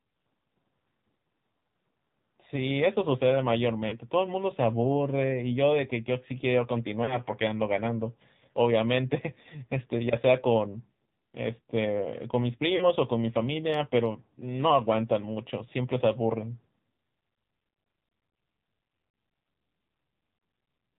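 Throughout, the speech has passed through the AMR narrowband mobile codec at a low bitrate, which fits the 7.4 kbps mode. Sampling at 8 kHz removes everything above 4 kHz, and the sparse pulse-driven vocal tract model leaves the voice plainly buzzy, muffled and synthetic.

At 3.88 to 4.00 s, 7.04 to 7.17 s and 12.76 to 12.92 s, lost AMR speech frames occur. Each gap is about 40 ms, which fits two consecutive frames failing their checks. The decoder repeats the previous pitch and vocal tract settings at falling gain, so each spot gives a short warbling, smeared dip before the voice returns weak or rough for a moment.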